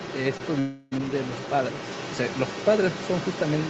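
A short speech recording that's come through a call, band-limited to about 8 kHz as you'd expect from an Opus link at that bandwidth, and it has three things going on. For the whole clip, start to finish, there's a second voice sitting underneath at roughly 10 dB below the main talker. That's other-side voice leaking through, most likely the far end playing out of a loudspeaker at the talker's device with the echo canceller leaving a good chunk of it in the mic signal. Then around 0.37 to 0.41 s there's a quick smear, a tiny wobble where the sound gets stretched for about 20 ms before blending back. That's short concealed packet loss: a packet didn't make it in time, and the decoder papered over the hole by extending what it had just played, then crossfaded back into the real audio. The bigger one runs from about 0.59 to 0.93 s. Roughly a third of a second is gone, and instead of going quiet the sound turns into a synthetic continuation, a buzzy, hissy extension of the last bit that decays without ever reaching silence, before real audio resumes further along with that section simply missing. 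That reads as a long network dropout, likely a burst of lost packets with concealment running across the whole gap.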